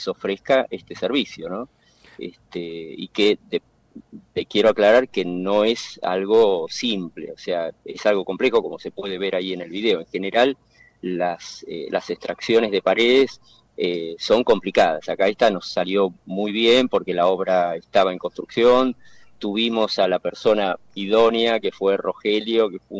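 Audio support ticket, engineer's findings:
No faults found; the call path sounds as expected, with nothing above 8 kHz, which fits a wideband codec such as G.722.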